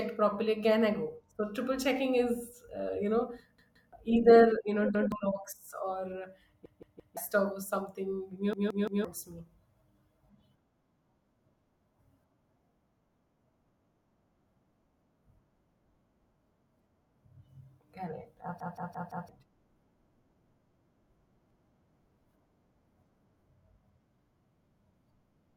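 Repeated buffer stutters occur at 3.58, 4.95 (just after "you know"), 6.66, 8.53, 18.60 and 21.50 s in this speech clip. Fresh audio arrived too late each time, so the device replayed its last 171 ms block, which fits an 8192-sample buffer. It replays one to four extra times, with a hard join at every repeat.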